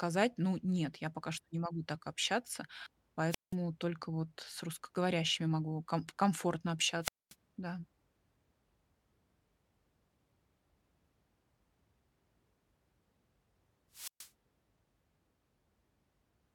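Three wireless microphone squelch dropouts interrupt the speech, at 3.29–3.55 s, 7.01–7.35 s and 13.92–14.30 s. In each, the FM radio link fades, hiss swells briefly, then the receiver's squelch mutes the output for about 180 ms, 230 ms and 130 ms before the voice returns. On a spectrogram, broadband noise brightens just before a near-empty vertical gap. The waveform collapses to almost a flat line there.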